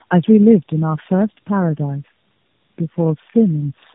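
A speech clip degraded throughout by tandem speech coding. The voice passes through three low-rate speech coders in succession, each re-encoding the already damaged output of the previous one, so the errors stack. The result is rough, muffled and warbly, worse than any single coder would produce. Nothing is present above 3.7 kHz. The character points to a chain such as G.729A followed by two AMR-NB stages, joined by G.711 links.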